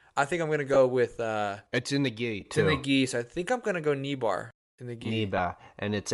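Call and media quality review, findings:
Bluetooth LC3 compression, throughout: grainy, breathy edge on the speech, with the upper band thinned and replaced by noise-like fill. The likely cause is the LE Audio LC3 codec, consistent with 10 ms frames at around 48 kbps, where high-frequency bins are zeroed and noise-filled.

Lost LE Audio frames at 0.74–0.77 s after "I think I'm gonna" (before "with uh"), at 2.41 s after "in the", and at 5.38 s after "bar in the gi": brief noisy smears. The decoder repeated the last spectrum with randomised signs. The first gap fits two lost frames, the others one each.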